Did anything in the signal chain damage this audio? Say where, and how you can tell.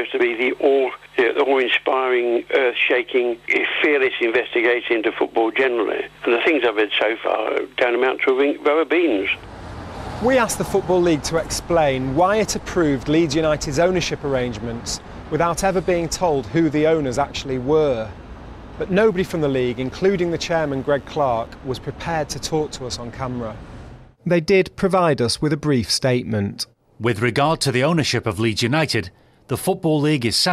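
Yes. An analogue line picked up mains interference from about 19.02 s to 21.47 s. This mains buzz is a raspy 50 Hz buzz with harmonics reaching into the kilohertz range, sitting roughly 40 dB below the signal.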